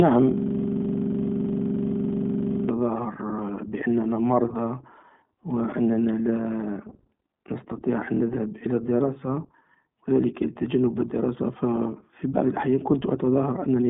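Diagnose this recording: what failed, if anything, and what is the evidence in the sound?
At the driver or buffer stage, a system hang loop: the machine stalled while the audio hardware kept replaying its ring buffer. From 0.38 to 2.69 s, a 42.67 ms piece repeats at about 23.4 Hz, 54 times, as a machine-gun stutter that fits a 2048-sample buffer.

At the codec stage, the iLBC codec runs throughout. Each 20 ms frame's excitation is coded independently, and the band is narrowband with nothing above 3.8 kHz. The speech sounds plainly rough and synthetic, which fits the 15.2 kbps iLBC mode.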